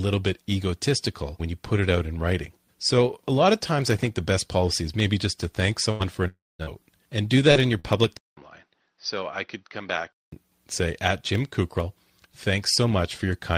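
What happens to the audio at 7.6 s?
Short concealed packet loss hits this speech from 7.51 to 7.58 s: about 40 ms of audio arrived too late for the decoder, so the receiver patched the gap by extending the preceding sound, then faded back into the real signal. It comes across as a brief smeared wobble. On a spectrogram the harmonics or noise run on unnaturally flat across that stretch.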